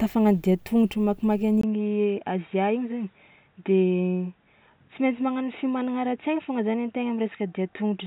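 Input switched to a poorer device, at 1.61 s and lasting to the end: after a 20 ms gap, the speech turns dull and boxy, with nothing above 3.8 kHz, drops roughly 5 dB in level, and sits on a new, faint background noise. This is likely the recording switching mid-take from its original microphone to a lower-grade input, such as a headset's call profile, whose narrower band and different tone and noise take over.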